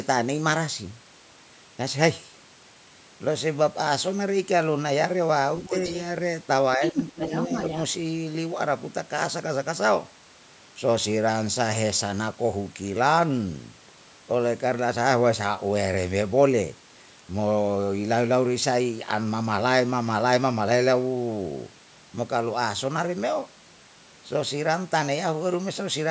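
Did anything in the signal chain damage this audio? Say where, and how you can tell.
Yes. A second voice leaks through at 5.64–5.96 s, faint, and 6.84–7.8 s, only slightly below the speech: other side's voice leaking through, likely residual loudspeaker echo the call's echo canceller missed.

The speech dips by roughly 10 dB at 6.77–6.96 s and 7.15–7.32 s, during that overlap. This is speech suppressed in double talk, likely with the echo canceller turning everything down at once.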